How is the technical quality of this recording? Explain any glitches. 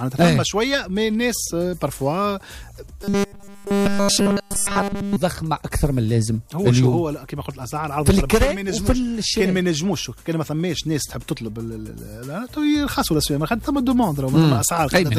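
The recording has one clear glitch. From 3.04 to 5.16 s, robotic sound from repeated short buffers turns the sound into a rigid 200 Hz metallic buzz. The likely cause is audio arriving too seldom, so nearly every moment repeats a roughly 5 ms slice. Unlike ordinary distortion, the buzz holds one fixed pitch while still loosely tracing the sound's shape.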